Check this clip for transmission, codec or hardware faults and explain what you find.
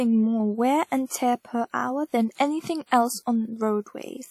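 There's one fault here, and it runs through the whole speech clip: the sound of WMA compression. From start to finish there's a ringing, washy smear around the speech, with a hiss that swells and fades with the level, and nothing gets through above 19.3 kHz. That fits a transform codec like WMA working with long blocks, where quantisation noise spreads over tens of milliseconds and weak spectral detail gets zeroed out. The damage is plainly audible, which points to a low rate, something like 48 kbps.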